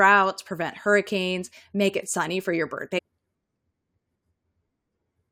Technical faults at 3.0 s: stream segment skipped

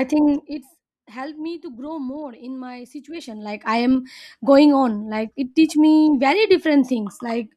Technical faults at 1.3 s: none

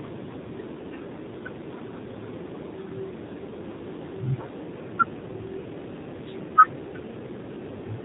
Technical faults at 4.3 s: AMR narrowband mobile codec

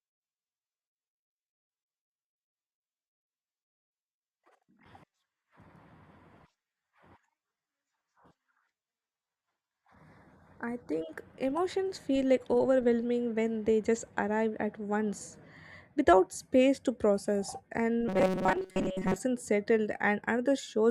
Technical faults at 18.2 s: robotic sound from repeated short buffers

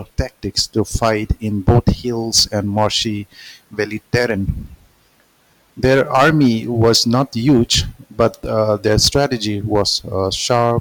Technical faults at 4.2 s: hard clipping

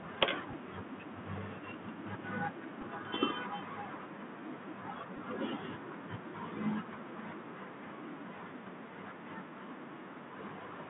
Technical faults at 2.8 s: Bluetooth CVSD headset codec; Bluetooth headset packet repeated

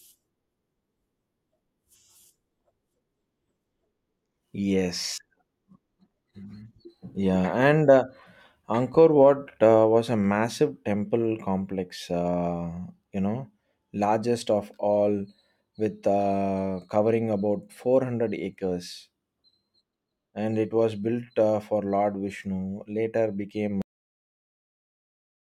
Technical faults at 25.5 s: cut-off end

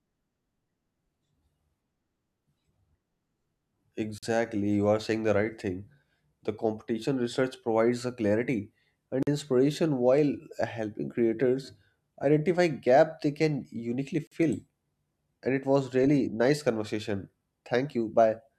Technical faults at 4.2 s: gap between chunks

